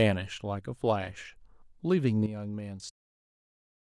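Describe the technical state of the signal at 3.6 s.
At 3.6 s the signal sits inside a sudden gain jump that begins at 2.26 s and runs to the end of the clip. At that instant the speech and the background noise both fall by about 10 dB. The most likely cause is a digital gain change, such as a setting or bit shift applied without a ramp. What separates it from a smooth fade, like the gentle fade-out heard around 2.92 to 3.0 s, is the hard step: the level drops in a single sample, can leave a click, and the noise floor moves down in lockstep with the speech.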